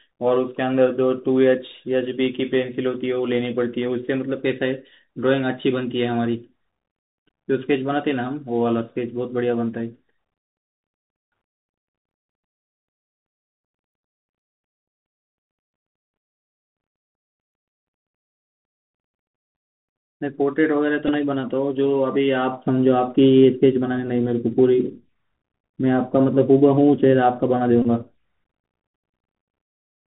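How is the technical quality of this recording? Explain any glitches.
The quality is rough, narrowband headset sound with two short glitches.

Throughout, the Bluetooth CVSD headset codec caps everything near 4 kHz. Its one-bit adaptive steps leave granular hiss, scratchy s sounds and overload on loud highs, which fits a 64 kbps link.

At 21.08–21.11 s and 27.82–27.87 s, there's a Bluetooth headset packet repeated. Lost packets get replaced by replaying the last one, so you hear a brief buzz near 267 Hz, longer at the second spot.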